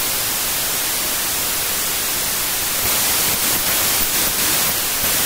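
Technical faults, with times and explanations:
Throughout, wrong sample width: packed 24-bit speech read as 16-bit, so mismatched bytes bury it in loud noise, slowed to about two-thirds speed and pitch.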